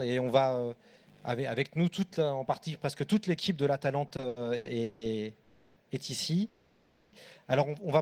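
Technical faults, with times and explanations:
4.07–5.03 s, repeated stalls (stutter): the audio drags and stutters through six short gaps, the longest 180 ms, about 420 ms in total, with the last sound stretched to fill each gap; packets kept arriving late, so the jitter buffer repeatedly ran dry.
5.43–5.78 s and 6.48–7.14 s, call audio freeze: the sound halts and is held as a fading buzz for 330 ms, then 640 ms, before resuming where it stopped; this is likely packets held up in transit, emptying the jitter buffer.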